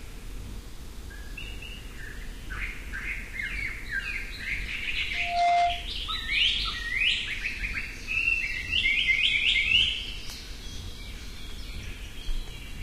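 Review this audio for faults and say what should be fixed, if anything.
A loudspeaker feedback squeal rises from 5.14 to 5.90 s. A steady 700 Hz tone swells in about a third of a second, ending roughly 10 dB above the sound. Lower the speaker gain or move the microphone away from the loudspeaker.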